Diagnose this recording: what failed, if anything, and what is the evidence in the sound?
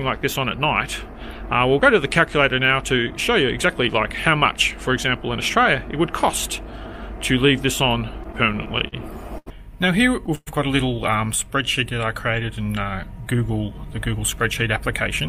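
Network delay and jitter-buffer underrun cause repeated stalls (stutter) from 8.23 to 8.94 s. Seven brief gaps, the longest 44 ms, are filled by continuing the last sound, about 108 ms in all, or 15% of that span. The waveform shows short repeated, smeared stretches, and the spectrogram shows brief horizontal smears where detail should change.

A short stall from a late packet at 9.38 to 9.48 s holds one sound for 82 ms while the jitter buffer waits, then resumes where it stopped, with nothing lost. On a spectrogram the harmonics run flat for that stretch. The waveform shows a repeated cycle.

A call audio freeze from 10.35 to 10.49 s stretches the last sound into a fading buzz or hiss for 114 ms, ending in 30 ms of silence. The likely cause is delayed packets emptying the jitter buffer. The waveform shows a decaying, repetitive segment and then a flat gap before the audio resumes.

A jitter buffer speed-up runs from 13.27 to 14.79 s. 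The receiver trims pitch-period-sized pieces to shed roughly 70 ms of built-up delay, so the audio plays at 105% speed and sounds slightly hurried. Pitch is unchanged: the spectrogram keeps the same harmonic spacing but looks compressed in time.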